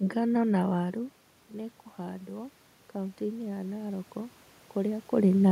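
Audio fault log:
1.48–5.47 s automatic gain rising: voice and room noise swell together by about 7 dB as the gain control slowly compensates for the input falling about 13 dB.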